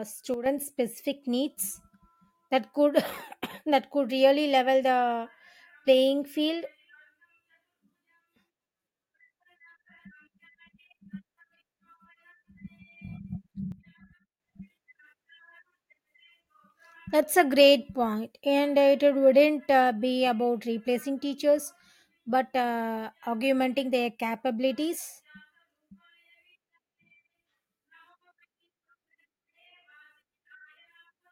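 At 0.34 s the level drops by about 8 dB and comes back at 0.46 s, and at 13.72 s it drops again by about 10 dB until 14.4 s. Both are sudden gain jumps. The speech and the background noise fall together, all at once, with no fade. The likely cause is a digital gain change applied between one sample and the next without a ramp, so the whole signal steps down and back up.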